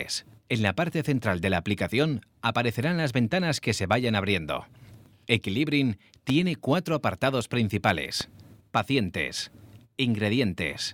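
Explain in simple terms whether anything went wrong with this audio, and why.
Yes, something went wrong: two sharp clicks jump out of the audio, one from 6.29 to 6.32 seconds and a softer one from 8.21 to 8.23 seconds, while the sound carries on underneath. Each is a loud pop, a brief thump much louder than the surrounding audio. The likely cause is a sudden jolt of electricity getting into the signal, from a plug, a switch, static, or a hiccup in the audio equipment.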